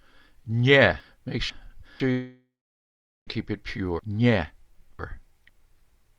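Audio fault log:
1.0–2.0 s, chunks out of order. A 500 ms block plays one block late. The sound jumbles briefly, with three hard joins.
2.11–3.29 s, long network dropout. The last sound smears into a fading buzz, then about 0.79 s of silence. Audio resumes with roughly 1.16 s missing, likely lost in transit.
3.99–5.49 s, chunks out of order. A 500 ms block arrives two blocks late. The passage sounds garbled, with three hard joins where the misplaced pieces meet.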